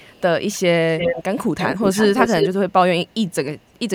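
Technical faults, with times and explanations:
0.0 to 0.21 s, 0.98 to 1.24 s, 1.57 to 2.49 s and 3.58 to 3.79 s, echo leak: a delayed copy of the speech returns, 401 ms late in the first scrap and 342 ms late afterwards. It is faint at the start, about as loud as the speech at 0.98 s, only slightly quieter across 1.57 to 2.49 s, and barely there at the end. The likely cause is a far-end loudspeaker feeding its microphone past an incomplete echo canceller. The copy is distinct and separated in time, unlike room reverberation's smeared tail.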